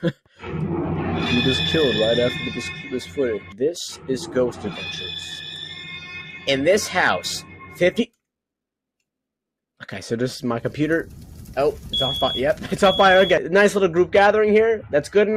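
A noise suppressor designed for speech has been applied to this music or non-speech sound, treating steady, sustained material as noise. It produces a level swing of around 5 dB that makes held tones pump and thin out, with decays visibly shortened on a waveform and tails fading early on a spectrogram. Sound is cut by the noise suppressor at 0.0–0.43 s (about 12 dB), 2.85–3.18 s (about 9 dB), 3.39–3.61 s (about 10 dB), 4.52–4.69 s (about 8 dB), 5.99–6.47 s (about 9 dB) and 7.4–7.81 s (about 11 dB). Each cut shows as a brief notch in the waveform envelope and a darkened band across the spectrogram lasting roughly 150 to 400 milliseconds.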